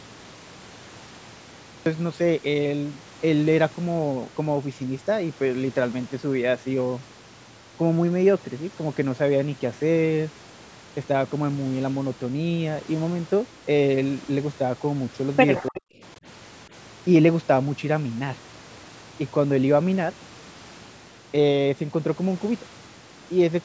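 The recording opens on digital silence until 1.86 s, when speech cuts in mid-sound with no natural attack or fade. This is a cut-off start: capture began late, so the first moment of sound is sliced off abruptly.

At 15.7 to 15.88 s the talker's level collapses for roughly a fifth of a second, dropping very deeply before recovering. This is speech suppressed in double talk, likely the echo canceller mistaking overlapping far-end audio for echo and attenuating the near-end speech with it.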